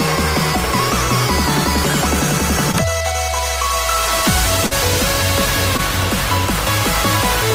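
Brief smears or wobbles break the sound at 2.71 to 2.75 s, 4.66 to 4.73 s and 5.77 to 5.81 s. This is short concealed packet loss: about 20, 40 and 20 ms of audio arrived too late, and the receiver extended the preceding sound before blending back.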